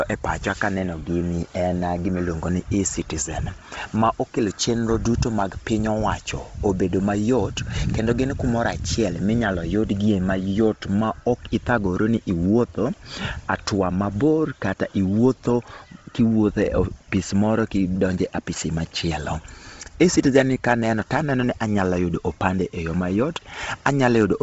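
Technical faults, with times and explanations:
Throughout, Bluetooth LC3 compression: the speech sounds heavily grainy and breathy, with nothing above 7.7 kHz, likely from a low-bitrate LC3 link (around 24 kbps) zeroing the upper spectrum and filling it with noise.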